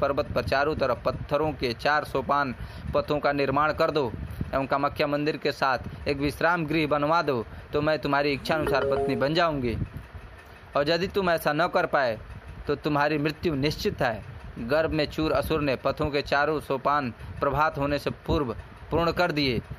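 No technical fault can be heard anywhere in the audio, which keeps a steady, intact signal throughout.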